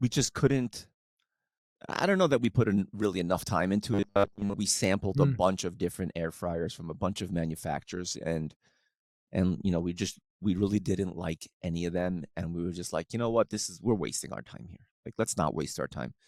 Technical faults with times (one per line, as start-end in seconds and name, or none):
3.94-4.55 robotic sound from repeated short buffers